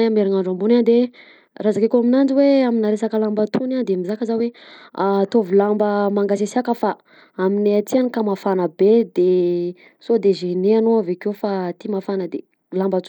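A speech recording whose codec damage is plainly audible for its whole length: the top end thins out and flickers, and a gritty, grainy noise with aliasing rides on the voice. The likely cause is Bluetooth SBC compression at a small bit pool, consistent with roughly 96 kbps. SBC splits the signal into a few wide sub-bands and assigns bits without a hearing model, so the weak high bands get few or no bits and the remainder is quantised coarsely.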